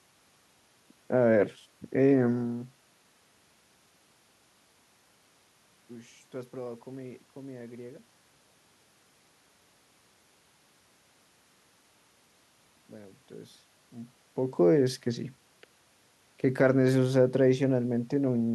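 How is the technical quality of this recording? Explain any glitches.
The signal carries no technical glitches, with the steady background of the room and the level shifts near two and a half and fourteen seconds, where the talker moves relative to the microphone, being part of the recording rather than anything the system introduced.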